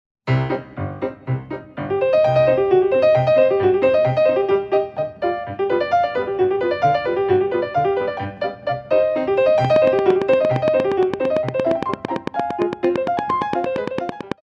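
A train of clicks runs from 9.65 to 14.33 s: about forty regular pops, 8.8 per second, some 15 dB above the sound, likely interference injecting repeated pulses.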